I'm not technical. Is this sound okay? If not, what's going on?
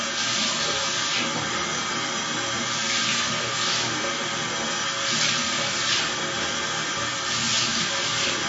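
No. Throughout, the sound is dull and smeared, with nothing above about 7.6 kHz, most likely from heavy AAC compression that discards detail to save space.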